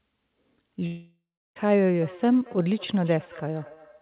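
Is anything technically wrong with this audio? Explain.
Yes, there are two problems, both over a phone-style path that cuts everything above 4 kHz, which fits G.711 mu-law.

From 0.86 to 1.57 s there's a gap, likely a long network dropout. About 0.7 s of audio never arrived, so the receiver stretched the last sound into a fading buzz. Roughly the final third of a second is silence, and the audio resumes without the missing part.

From 2.01 s to the end there's feedback echo between two devices. A second device in the room is replaying the call, and the first microphone picks it up. The sound returns about every fifth of a second, thin and ringy, peaking about 22 dB below the speech.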